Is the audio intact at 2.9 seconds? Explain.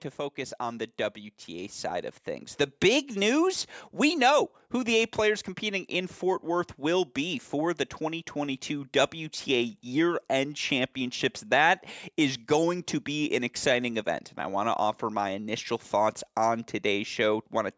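No. At 2.9 seconds the clip is inside an automatic gain rising event that runs from 0.35 to 3.13 s. The call's gain control judged the incoming level too low and kept turning its gain up across those nearly three seconds, by about 7 dB in all. Because the whole signal is amplified together, the speech and the background noise around it swell upward at the same slow rate, with the 2.9 s moment sitting near the top of that climb.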